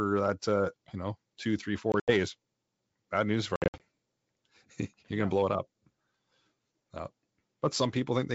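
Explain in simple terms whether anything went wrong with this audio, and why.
Packet loss on an ADPCM call breaks the speech twice. Right after "you know two three", from 1.92 to 2.12 s, bits of sound drop out as sudden silent gaps, about 100 ms lost in all, the longest 80 ms. From 3.56 to 3.82 s it happens again, with 160 ms missing and the longest gap 60 ms. A handful of packets went missing each time. The receiving end rebuilds each sample from the ones before it, so it loses track. When sound resumes, it comes back slightly distorted for a moment, then settles.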